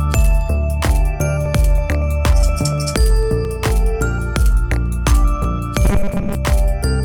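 At 1.46, 3.45 and 5.44 s there is audio missing between chunks. The recorder likely drops a few milliseconds at each 2-second chunk boundary, leaving brief, spliced skips.

From 5.85 to 6.35 s there is robotic sound from repeated short buffers. Late audio is likely patched by replaying a short buffer, producing a rigid, metallic 200 Hz buzz that fits a 5 ms buffer.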